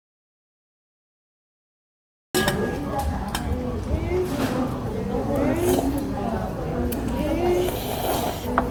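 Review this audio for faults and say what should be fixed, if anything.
The audio dropout to silence runs from the start to 2.35 s: silence with no room tone, unlike a fade or gate. The likely cause is a lost input while recording continued. Monitor input levels and connections during capture.

Generation loss is present throughout: swirly, hollow, smeared attacks, worse than one pass at what sounds like 64 kbit/s Opus. That points to several re-encodes, likely around seven. Keep a lossless master and encode only once.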